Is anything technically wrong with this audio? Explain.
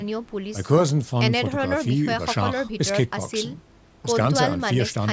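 No, nothing's wrong here: the speech has simply been through a call's microphone processing, so the lowest bass is trimmed and nothing sits above 8 kHz, which is just how that path is meant to sound.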